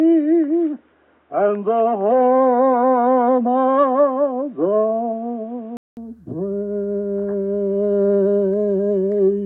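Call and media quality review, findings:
Dull, boxy sound from 0.0 to 5.97 s, nothing above about 3.8 kHz. Faint added noise floor, well below the signal. About 0.2 s of silence at the switch, then full band returns with a modest level jump. Likely cause: input switched to a poorer device, then back.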